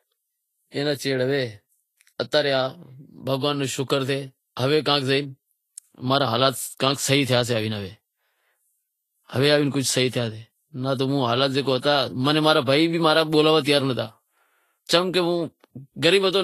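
From start to finish, the speech carries plainly audible codec damage. Nothing is heard above 14.1 kHz. The treble that remains sounds hissy and grainy. Consonants and attacks are blurred, and tonal parts of the voice sound roughened. The likely cause is Vorbis compression at a low setting, which fits a bitrate near 28 kbps. The encoder drew a smooth spectral floor and quantised the detail above it coarsely. Fine high-frequency structure became noise of similar energy.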